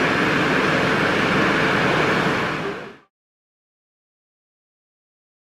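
Nothing here goes wrong: the only change is a smooth fade-out, done the way an editor would, that begins around 2 seconds and eases down to silence by 3.11 s without any click or hard edge.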